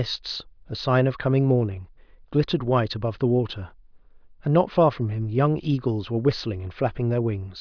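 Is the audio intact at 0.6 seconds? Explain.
Yes, at 0.6 s the audio plays through cleanly, with no dropout, click, distortion or other fault.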